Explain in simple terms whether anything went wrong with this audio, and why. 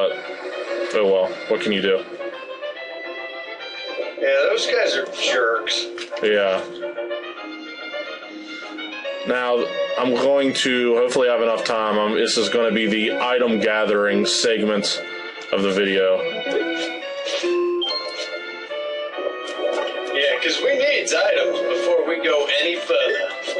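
Nothing went wrong here.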